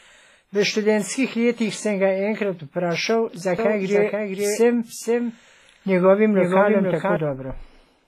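From start to end the speech has a ringing, washy quality. A hiss swells and fades with the signal, and nothing is present above 15.4 kHz. This is likely WMA compression at a heavy setting, which fits a low bitrate near 24 kbps. Long transform blocks smear the quantisation noise, and weak detail is dropped.

At 3.59 s, right after "sem ga enkrat vprašal", a doubled audio track begins. A full-band copy trails about half a second behind, a few dB quieter. It has no decay or room colour. It cuts in and out abruptly, ending at 7.17 s. A likely cause is a second, slower capture path mixed in.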